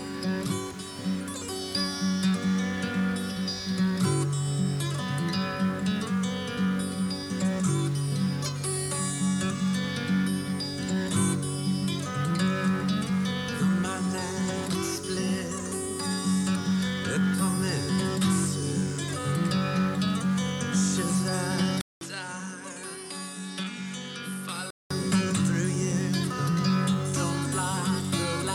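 The audio holds up until 21.81 s, when there's a 200 ms gap and then it comes back duller, nothing above 12 kHz, noticeably quieter, with a faint new noise floor. That lasts until 24.90 s, and likely the input switched to a poorer device for that stretch.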